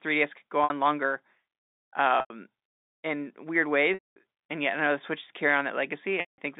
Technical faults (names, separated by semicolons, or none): packet loss with pitch repetition